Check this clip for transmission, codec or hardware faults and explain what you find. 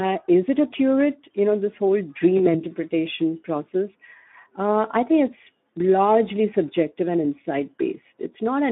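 Two faults are present: speech codec damage throughout, and one packet-loss concealment event.

Speex codec, throughout: this CELP coder is starved of excitation bits, which fits a bitrate around 11 kbps. The speech sounds hoarse and grainy, with plainly audible damage, and the line band runs from 200 Hz to 3.5 kHz.

VoIP packet loss concealed by the speech codec, 2.37 to 2.62 s, right after "know this whole": the decoder extended its last pitch and filter state to fill the gap, which fits a single lost 20 ms frame. The sound is stretched and fades, and stays distorted for roughly a quarter second while the decoder recovers.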